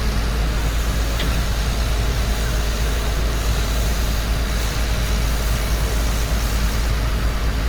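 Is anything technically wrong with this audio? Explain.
Yes. Opus compression runs throughout: the energy of each band is kept, but with bits running short, bands are filled with folded or noisy content, so tones sound grainy and rough. The sound stays fullband to about 20.1 kHz and swirls less than MP3 would, which points to the likely cause, Opus in its music mode at a bitrate near 24 kbps.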